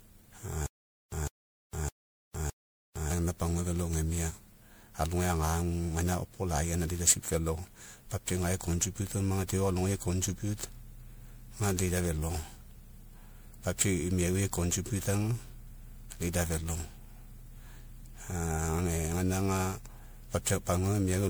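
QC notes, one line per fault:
throughout: generation loss. The speech has likely been decoded and re-encoded as MP3 at 128 kbit/s around ten times. Each pass requantises on a shifted frame grid, so noise and spectral holes accumulate. The result sounds swirly, hollow and smeared, with blurred attacks.
0.66–3.11 s: stutter with silent gaps. The stream likely stalled, replaying its last fragment on each retry before running dry. The same 153 ms burst returns four times at a steady 612 ms period, with 458 ms of digital silence between repeats, and the speech due in that span is lost.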